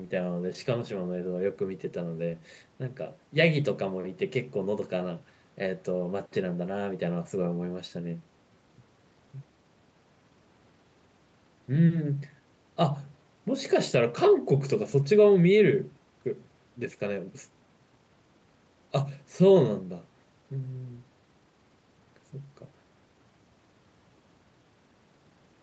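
Nothing goes wrong anywhere in this speech, which simply sounds like it came through an ordinary call, with the top end stopping around 8 kHz the way a wideband call codec like Opus at a modest bitrate would leave it.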